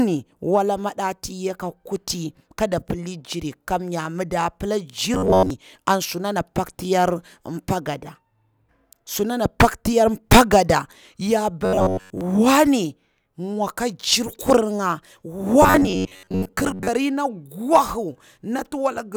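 From 5.14 to 5.50 s, 11.65 to 12.21 s and 15.62 to 16.89 s the speech becomes a rigid, metallic buzz at about 94 Hz, a robotic sound from repeated short buffers, likely from roughly 11 ms chunks looping while most of the real audio is skipped. Unlike a stutter, the buzz stays at a fixed rate.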